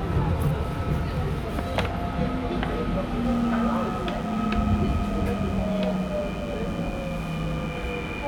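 A nearby DECT cordless phone or base station is pulsing radio bursts every 10 ms, which the audio circuitry rectifies into DECT cordless phone buzz. In this recording of sounds, a thin, steady 100 Hz buzz rich in harmonics appears at 3.25 s, sitting roughly 30 dB below the sound, and continues to the end.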